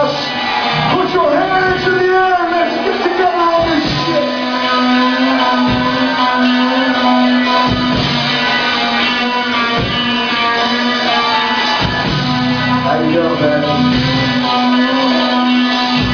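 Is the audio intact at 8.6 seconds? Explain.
Yes, the audio is intact at 8.6 seconds, with no dropout, click, distortion or other fault to be heard at that moment.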